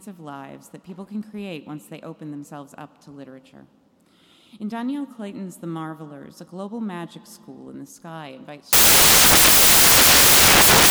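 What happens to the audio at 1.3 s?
Nothing goes wrong at 1.3 s: the audio plays through intact at that moment, with no dropout, click or other fault to be heard.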